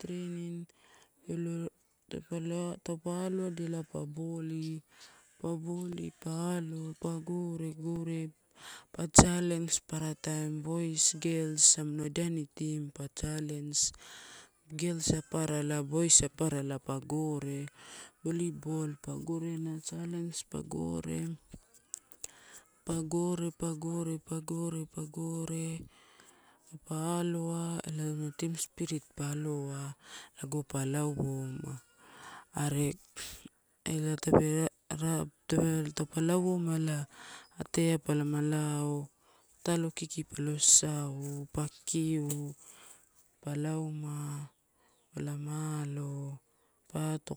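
From 5.92 s to 12.04 s, the speech carries a regular tick about once every 1.02 s, roughly seven in all, each a dropout of a few milliseconds filled with silence. These are periodic USB or driver dropouts: something repeatedly stalling the audio driver or USB transfer.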